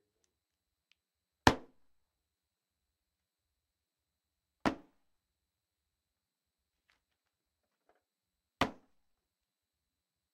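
From 1.52 to 9.24 s, about seven clicks recur every 1.55 s as thin vertical spectrogram lines, likely clock drift buffer slips dropping or repeating a few dozen samples.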